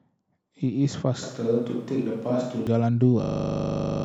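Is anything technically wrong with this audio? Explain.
Yes, there are two faults. From 1.23 to 2.67 s, a switch to a distant microphone: the speech turns roomy and hollow, with thinner bass and faint room noise. The level barely changes. A far microphone likely replaced the close one.

From 3.24 s to the end at 4.04 s, a system hang loop: a 40 ms piece of buffer repeats, buzzing at 25 Hz. About 0.7 s of audio is lost.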